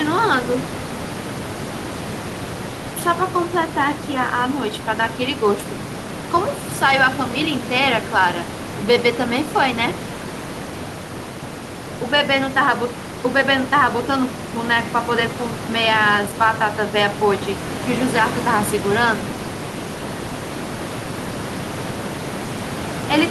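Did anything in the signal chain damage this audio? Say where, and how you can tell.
No, the signal chain did no damage here: the room's background noise sits about 10 dB below the speech and is part of the recording, and the top end stops near 12 kHz, which fits an Opus call path running at around 32 kbps and is how that route normally shapes the sound.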